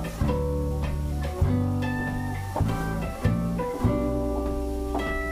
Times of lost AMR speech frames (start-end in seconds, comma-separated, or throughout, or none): none